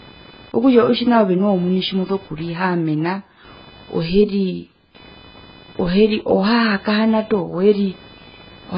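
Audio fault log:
throughout, computer activity noise: a buzz pulsing around 500 Hz, well below the speech, rising and falling with the machine's load on the shared ground rather than with the speech.
throughout, AAC compression: the speech is dull and warbly with nothing above 5.1 kHz, likely from heavy AAC-LC coding at a very low bitrate, around 12 kbps. Smeared, watery sibilants set it apart from a plain low-pass filter.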